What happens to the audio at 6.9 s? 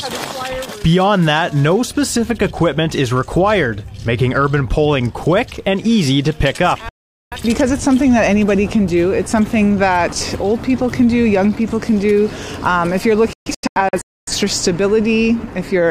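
A digital broadcast dropout runs from 6.89 s to 7.37 s. The receiver stopped getting usable frames, either because the signal was lost or because frames failed their error check, so it muted its output until clean frames arrived again. The sound drops to silence through a very fast fade of about 3 ms, stays silent for nearly half a second, then comes back. The missing audio is gone, which fits roughly ten lost frames.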